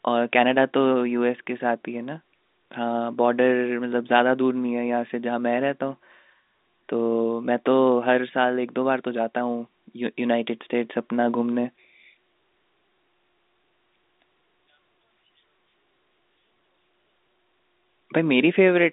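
No technical faults can be heard anywhere in the speech. It comes through a G.711 telephone line, so the sound sits in a narrow band of roughly 250 Hz to 3.7 kHz, with nothing above about 3.8 kHz and only a faint hiss that rises and falls with the level.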